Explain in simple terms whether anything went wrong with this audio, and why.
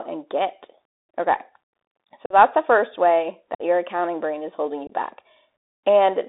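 The whole speech clip has passed through a Bluetooth CVSD headset codec, the narrowband link headsets use for calls. Only roughly 300 Hz to 3.7 kHz gets through, so the voice sounds thin and muffled, with scratchy s sounds and a grainy hiss underneath.

There is also unconcealed Bluetooth headset packet loss at 2.26, 3.55 and 4.87 seconds. Small chunks of audio went missing between headset and phone, leaving abrupt gaps of about 45, 49 and 23 milliseconds where the speech simply drops out.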